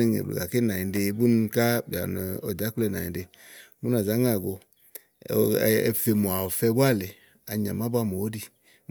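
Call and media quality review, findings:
No audible faults found in the speech clip; nothing to action.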